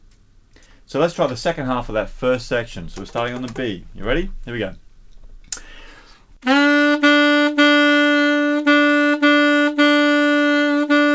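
Nothing goes wrong anywhere in the clip; the sound simply comes over a WebRTC call path, with the codec's band limit leaving nothing above 8 kHz, which fits a wideband call codec such as G.722.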